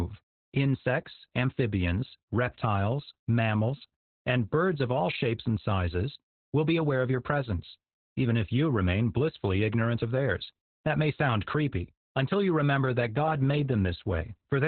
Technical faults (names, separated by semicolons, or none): Opus voice compression